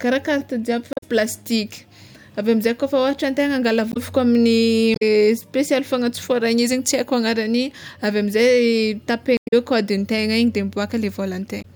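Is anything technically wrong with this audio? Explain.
Yes. The speech has five bursts of damaged data in a compressed stream: 0.90–1.03 s, 3.89–3.97 s (right after "ôhatra antegna angala"), 4.92–5.03 s, 9.34–9.53 s and 11.58–11.65 s. Corrupted bytes make the decoder misread frames, lose sync and hunt for the next valid header, producing brief chirps or squawks.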